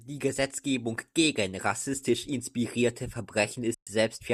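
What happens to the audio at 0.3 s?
Nothing goes wrong at 0.3 s: the speech runs on intact through that moment, with no dropout, click or other fault.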